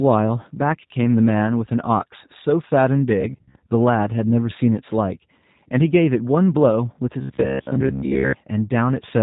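The whole clip runs through a G.729 codec at 8 kbit/s, so nothing gets past 4 kHz, and the speech has a plainly rough, slightly synthetic edge. From 7.21 to 8.33 s there's a robotic sound from repeated short buffers: most of that stretch turns into a rigid, metallic buzz at about 67 Hz, likely from the last 15 ms or so being looped while fresh audio arrived too slowly.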